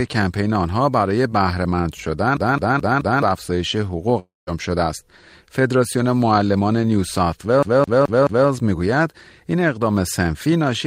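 From 2.37 to 3.22 s the speech falls into a CD stuck on one turn. A scratch keeps throwing the laser back one track, so the same 214 ms slice plays four times, with a brief mute at each jump. It sounds like the quick, regular stutter of a skipping disc. On a waveform the identical block repeats side by side. A spectrogram shows the same pattern copied at even intervals, separated by thin vertical gaps.

At 4.19 to 4.49 s comes a long network dropout. About 280 ms of speech never arrives. The receiver stretches the last sound for about 275 ms into a fading buzzy hiss that leaves about 170 ms of near-silence before the speech resumes without the missing part, likely because the packets were lost in transit. A spectrogram shows smeared, blurred energy trailing off into an empty band, and the waveform shows a decaying tail and then a flat line.

From 7.63 to 8.48 s the same CD stuck on one turn returns, with the same 214 ms loop played four times and the same repeating blocks and gaps.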